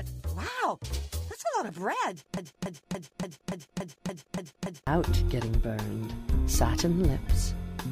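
At 2.37 s the sound catches on a short fragment and a broken-record loop begins. A piece about 286 ms long plays again and again, back to back. It repeats nine times, until 4.87 s. Each pass is identical, so the effect is a rigid, mechanical stutter. The likely cause is a stalled player, encoder or stream that kept resending the last fragment it held. Whatever should have played in those 2.5 seconds is gone.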